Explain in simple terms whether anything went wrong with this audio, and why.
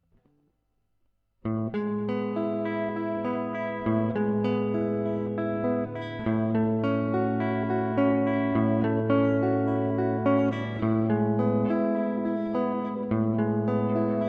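Listening through this recording of sounds, nothing stood out as having gone wrong.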